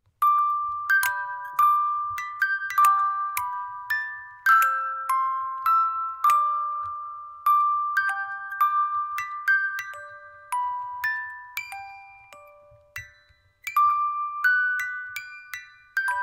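No technical faults are audible anywhere in this recording.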